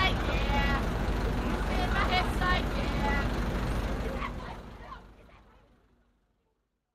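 No technical faults can be heard in this audio. From roughly 4 s the level eases down in a smooth fade-out that runs to the end, with no click or hard edge.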